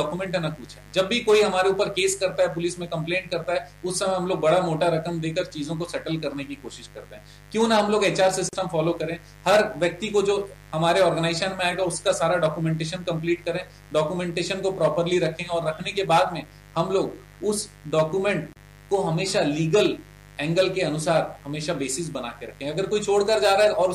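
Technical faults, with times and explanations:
Throughout: mains buzz. A steady, raspy buzz sits about 25 dB below the sound. Sharp switching spikes twice per 50 Hz cycle produce it. On a spectrogram it appears as evenly spaced horizontal lines at multiples of 50 Hz, climbing into the kilohertz range.
8.49 s and 18.53 s: gap at a join of encoded pieces. Separately encoded pieces kept their start delay and end padding, so the sound stops for 40 ms, then 31 ms, and resumes where it left off. The waveform shows a flat notch with smeared edges; the spectrogram shows a thin blank vertical stripe.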